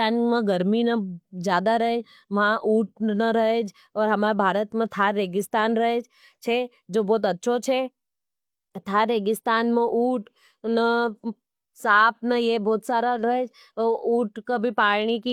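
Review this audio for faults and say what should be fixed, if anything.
Nothing here needs fixing; I gave the speech a careful listen and didn't catch a single fault anywhere in it.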